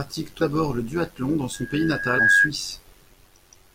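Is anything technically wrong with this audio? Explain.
Yes, there are three distinct faults.

Throughout the speech there is a metallic buzz with extra tones around the voice, riding on everything, with the level swinging by about 6 dB around a hundred times a second. This is overlap-add ripple. The audio was processed in windowed frames and reassembled with an overlap whose windows do not sum to a constant gain, so the level dips and swells once per frame at roughly a 100 Hz frame rate.

At 0.41 s and again at 2.18 s the speech lurches forward. At the first point roughly a tenth of a second of audio disappears, and at the second somewhat more, around 150 ms. These are compressed frames skipped: several consecutive coded frames were never played, either missing or rejected as damaged.

From 1.53 s to 2.51 s a single tone at 1.6 kHz swells up over about a second until it sits about 10 dB above the speech, then stops. 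This is loudspeaker feedback squeal. A microphone was picking up the loudspeaker it feeds, and at 1.6 kHz the loop gain exceeded one, so that frequency kept reinforcing itself into a rising whistle.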